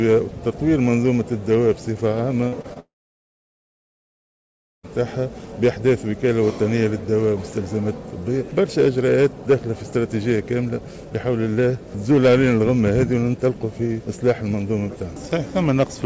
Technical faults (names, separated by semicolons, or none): short concealed packet loss; long network dropout